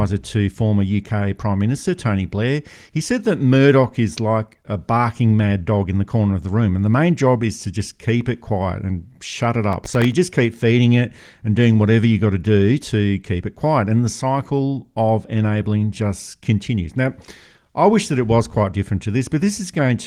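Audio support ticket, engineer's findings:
Gritty crackle burst, 9.73 to 10.12 s, after "quiet and shut it", before "just keep feeding it". Processor overload crackle. Audio thread missing deadlines on sub-millisecond buffers, several in a row. Each miss drops to silence, hard-edged. Light Opus texture underneath.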